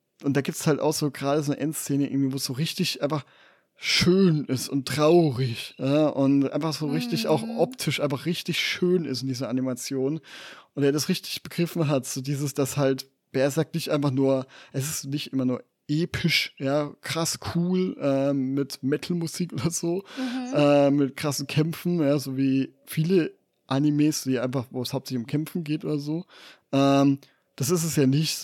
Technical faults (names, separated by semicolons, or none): none